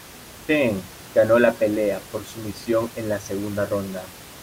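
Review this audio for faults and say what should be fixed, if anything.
No faults; nothing needs fixing.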